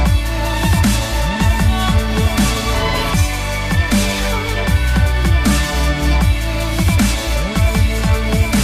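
No technical faults can be heard anywhere in this recording.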